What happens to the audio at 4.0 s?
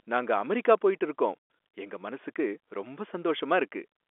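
Nothing goes wrong at 4.0 s: the speech carries on intact through that moment, still heard through the narrow telephone band of G.711 coding.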